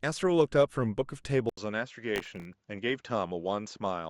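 A speech recording in which, at 1.49 s, the input was likely switched to a poorer device: after a silence of about 80 ms, the sound turns duller with nothing above 7.6 kHz, drops about 5 dB in level, and carries a faint new noise floor roughly 50 dB down until the end. From 2.16 to 2.53 s, processor overload crackle occurs. The system missed around twenty buffer deadlines across that stretch, which fits very short buffers of under a millisecond, and each miss replayed a scrap of old audio with hard edges, producing a gritty burst of crackle over the speech.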